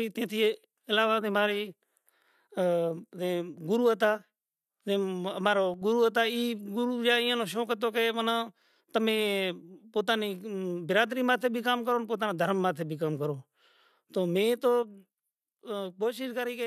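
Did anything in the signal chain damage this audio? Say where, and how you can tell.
Yes. The speech falls abruptly by about 6 dB from 5.74 to 5.82 s, and again from 14.83 s to the end. That exact step is one channel dropping out. Only half the shared signal survives the mono sum. The likely cause is intermittent analogue wiring.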